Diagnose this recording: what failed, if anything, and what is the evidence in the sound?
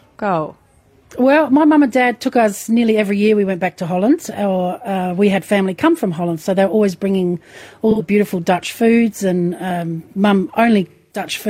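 The codec's the culprit: AAC frame loss with concealment, twice. There's a short smeared, phasey patch from 7.90 to 8.02 s, about 85 ms, which fits two lost frames. A longer one runs from 10.90 to 11.26 s, about 213 ms, which points to roughly five frames gone. With nothing to decode, the decoder rebuilt those stretches from the last good spectrum, so the sound smears instead of cutting out.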